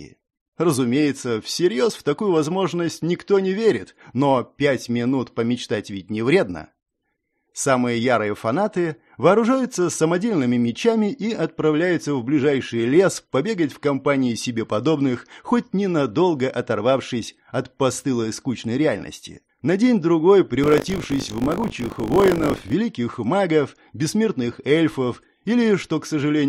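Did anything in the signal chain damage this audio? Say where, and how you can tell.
Yes, buffer tearing at the driver stage, 20.62–22.74 s: the writer and hardware read pointer crossed, splicing stale audio (about 40 ms old) into each period, producing a 50 Hz rattle.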